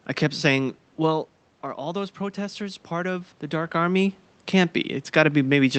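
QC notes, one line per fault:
1.76–3.79 s, automatic gain rising: the speech arriving at the microphone drops by about 10 dB, and the gain control responds by lifting its gain about 3 dB over roughly two seconds. The speech creeps back up while the room noise beneath it swells by the same amount. That shared rise of speech and background sets it apart from the talker moving, which near 1.0 s and 3.5 s shifts only the speech level.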